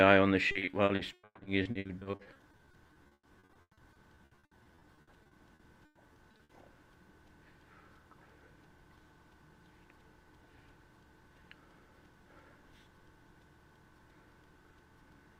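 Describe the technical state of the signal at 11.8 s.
At 11.8 s the signal is intact, with no dropout, distortion, clicks or other fault audible at that point.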